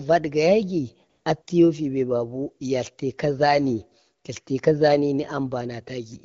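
A smooth, steady hiss replaces the real background from 1.09 to 1.25 s and again from 1.41 to 1.47 s. This is AMR comfort noise: speech frames stopped, and synthetic noise filled those gaps.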